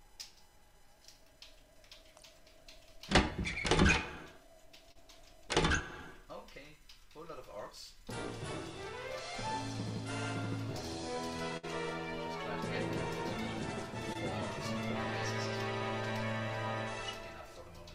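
Around 4.91 to 4.97 s and again at 14.13 to 14.17 s there's short concealed packet loss: a few tens of milliseconds went missing and got patched over, leaving a quick smear. At 11.57 to 11.65 s a burst of packet loss drops about 60 ms; the fill holds the last sound and fades before the audio jumps ahead.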